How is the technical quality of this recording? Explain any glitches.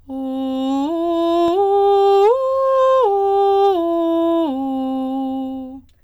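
The music has one glitch, hard clipping from 2.06 to 2.32 s. The peaks are driven about 2 dB past the limit and sheared flat, giving a brief crackle. The waveform shows squared-off tops, and the spectrogram shows harmonics smeared upward.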